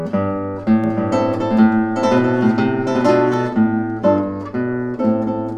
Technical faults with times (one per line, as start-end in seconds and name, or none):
0.84-3.34 doubled audio track